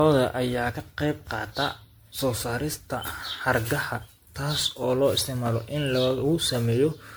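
Generation loss runs throughout the speech. It sounds swirly, hollow and smeared, with blurred attacks. This is likely repeated MP3 coding, about seven passes.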